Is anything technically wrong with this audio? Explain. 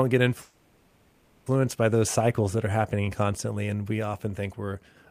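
Yes. From 0.41 to 1.48 s there is a call audio freeze: the last sound stretches into a fading buzz or hiss for about 1.05 s, likely because delayed packets emptied the jitter buffer. Unlike a dropout, nothing is lost. The audio resumes exactly where it stopped, just later.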